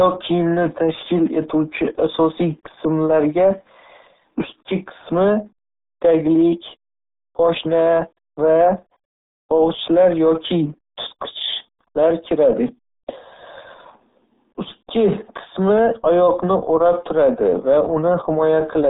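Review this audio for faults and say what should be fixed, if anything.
RealAudio 14.4 codec damage runs through the whole clip. The speech is confined to roughly 150 Hz to 3.7 kHz with nothing above 3.8 kHz, so sibilants and consonant detail are gone and the sound is narrow and muffled. The heavy gargling, smeared texture comes from a very low-rate speech coder discarding most spectral detail, which fits an 8 kbit/s RealAudio 1 encode. To prevent it, source the recording from an uncompressed or high-bitrate original rather than a dial-up-era stream.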